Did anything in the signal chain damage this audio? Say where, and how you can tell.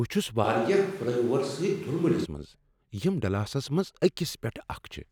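Yes. A switch to a distant microphone runs from 0.46 s to 2.24 s, starting just before "منٛز یم ڈلاسس منٛز". Across that span the speech turns abruptly roomy and hollow with thinner low end, then snaps back to the close sound. The level stays roughly the same, but room noise rises to around 30 dB below the speech. At the capture stage, the close microphone's feed likely dropped out and a farther pickup filled in.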